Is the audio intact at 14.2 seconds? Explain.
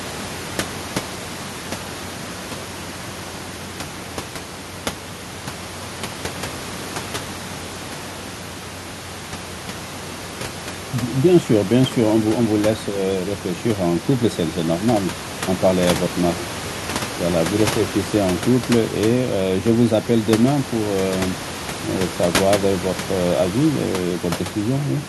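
Yes, the audio is intact at 14.2 seconds, with only the room's own background noise audible about 13 dB below the speech.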